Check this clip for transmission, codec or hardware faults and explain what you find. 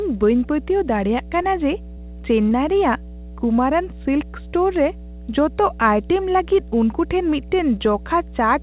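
Two faults stand out in the speech: a constant hum and two brief dropouts.

Mains hum runs throughout as a steady 60 Hz tone about 15 dB below the speech, coupled in from the power line. Its fixed pitch and harmonics set it apart from broadband noise.

Short concealed packet loss occurs at 1.42–1.46 s and 2.50–2.53 s. The receiver stretched the preceding sound over missing audio, causing brief smears rather than clean silent gaps or clicks.

The call path's narrow band, with nothing above 4 kHz, fits a G.711 telephone codec.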